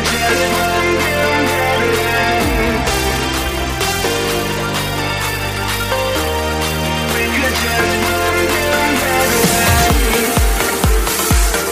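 The audio carries two short glitches where a corrupt frame was decoded: at 4.57 to 4.60 s and at 10.68 to 10.73 s, each spanning a couple of damaged frames. Flipped bits made the decoder apply wrong gains and codes, scattering energy into the wrong frequencies. The second glitch is louder, peaking near -5 dBFS against roughly -10 dBFS. A spectrogram would show narrow vertical smears, and the waveform brief spikes.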